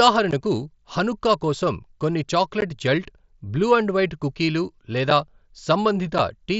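Unconcealed Bluetooth headset packet loss at 0.31, 2.61, 5.10 and 6.18 s: headset-to-phone speech packets went missing and were replaced by silence or an idle pattern, leaving abrupt 15 ms holes at the first two points and 7.5 ms holes at the last two, which fits one or two dropped 7.5 ms frames. Over the mSBC link, the speech keeps its 8 kHz wideband top with light graininess.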